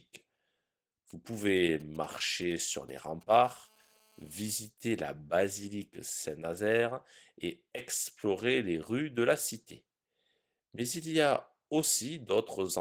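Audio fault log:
Throughout: Opus voice compression. The codec runs in hybrid mode, with linear prediction below 8 kHz and a transform layer above, at a rate that points to around 16 kbps. The excitation is coded coarsely, so the speech sounds plainly hoarse and slightly robotic, though content reaches about 19.7 kHz.
1.10–3.47 s: GSM signalling bursts. A nearby 2G phone is signalling with short groups of radio bursts, which the audio circuit rectifies. This produces a galloping dit-dit-dit of brief 217 Hz buzzes, roughly 25 dB below the speech.
3.48–4.52 s: GSM phone buzz. The nearby phone switches to steady call transmission, pulsing 217 times a second, and the rectified pulses form a hard, raspy 217 Hz buzz rich in harmonics. It sits about 32 dB below the speech and stops just before "la basilique".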